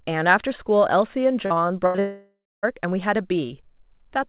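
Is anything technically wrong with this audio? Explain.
Yes, two network faults run back to back in this speech.

From 1.46 to 2.00 s there is repeated packet loss (robotic sound). Four short holes open in quick succession, the longest about 79 ms, and the receiver patches each by stretching the last bit of sound forward. About 29% of this stretch is patched material, so the speech turns choppy and robotic. Unlike a single long dropout, the real audio keeps returning between the holes.

From 2.00 to 2.65 s comes a long network dropout, which likely explains what is heard. For about 640 ms no fresh audio is played. The last sound is first carried on as a buzzy hold that fades, and then about 280 ms of silence follows before the speech resumes with that section gone. What separates this from the choppy stretch before it is one continuous gap, not a string of brief ones. Throughout, nothing is heard above 4 kHz, which fits a telephone-band codec such as G.711.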